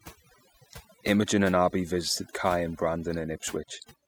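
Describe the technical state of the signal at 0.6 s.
At 0.6 s the speech is caught in overdone noise removal, which runs through the whole clip. The noise reducer is clamping individual frequency bands down whenever they sit near its noise estimate, so the background drops and breaks up into twinkly specks.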